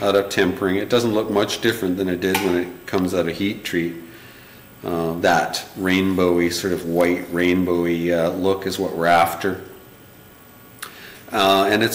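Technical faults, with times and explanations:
Throughout, hard clipping. The signal is driven about 7 dB past what a stage in the chain can pass, so peaks are sliced flat. Under one percent of the audio goes over. The flat tops add high harmonics, heard as crackle on the loudest moments.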